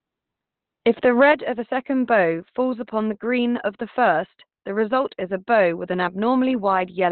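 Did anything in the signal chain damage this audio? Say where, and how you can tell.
Yes, at the codec stage, throughout the clip. Nothing reaches above about 4.2 kHz, and the speech sounds muffled and hoarse. This is likely Opus compression in its narrowband SILK speech mode, which points to a very low bitrate of around 12 kbps that strips the upper band.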